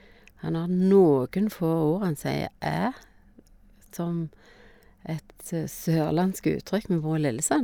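No technical faults are audible in this recording.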